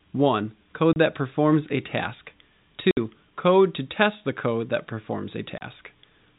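At 0.93 s the speech drops out for 30 ms, at 2.91 s for 60 ms, and at 5.58 s for another 30 ms. Each gap is packet loss filled with silence: the receiver had nothing to play and played silence, with hard edges on both sides. The lengths fit a 30 ms packet, with two consecutive packets missing at 2.91 s. The band-limited G.711 telephone sound carries on around the gaps.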